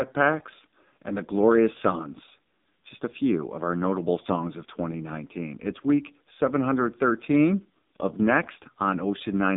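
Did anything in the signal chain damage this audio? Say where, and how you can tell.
Yes. The damage happened at the codec stage: the speech was passed through an AMR narrowband mobile codec at a very low bit rate, and it is present throughout the clip. The audio is confined to roughly 150 Hz to 3.7 kHz, with nothing above 3.7 kHz, and the voice has a heavy buzzy, synthetic quality. That points to a low mode around 5.9 kbps, where too few excitation pulses drive the vocal-tract model, so the natural texture of the voice is lost.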